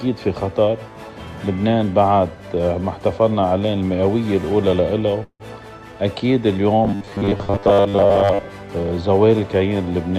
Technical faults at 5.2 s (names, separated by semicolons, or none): call audio freeze